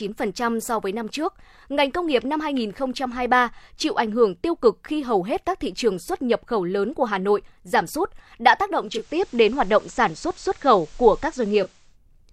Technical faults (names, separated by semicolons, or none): digital radio blending to analogue